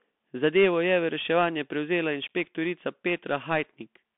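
Throughout the speech the sound is thin and boxed-in, with a granular hiss under it, scratchy s sounds and a rough edge on loud, bright passages. This is the Bluetooth CVSD headset codec. The band runs from about 200 Hz to 3.5 kHz, with nothing above 3.7 kHz. CVSD sends one bit per sample saying up or down, consistent with a 64 kbps stream, and its adaptive step can't keep pace with fast high-frequency swings, leaving plainly audible codec damage.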